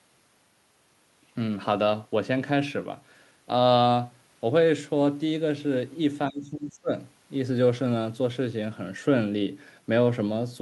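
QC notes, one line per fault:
6.3 to 6.9 s, speech suppressed in double talk: the speech dips steeply, by around 20 dB, likely because an echo canceller mistook overlapping talk for echo and ducked it.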